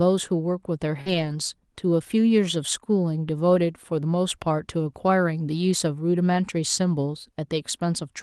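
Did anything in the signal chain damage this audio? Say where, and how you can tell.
Yes. The network stage shows a short concealed packet loss at 1.01 to 1.08 s. About 40 ms of audio never arrived in time, and the receiver papered over the gap with roughly 44 ms of synthesised continuation, extending the preceding sound's pitch or noise shape before crossfading back into real audio. You hear it as a brief smear or wobble rather than a silent dropout, since the decoder invented plausible sound instead of leaving a hole.

Overlapping that, from 1.06 to 1.32 s, is a lost packet rebuilt from error correction. About 140 ms of audio sounds rougher and grainier than its surroundings, with no gap, which points to Opus in-band forward error correction. Each missing packet was replaced by the low-bitrate duplicate carried in the packet after it, and the stretch's length fits around seven such packets. 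The Opus call path, band-limited to 12 kHz, shows its normal coding character outside this stretch.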